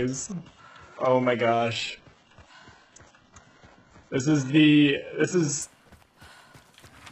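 From 0 to 5.62 s, an adaptive stream starting at a low bitrate removes sound above 8 kHz and strengthens codec artefacts, then quality jumps, gapless.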